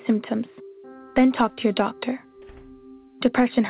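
No faults can be heard anywhere in this clip.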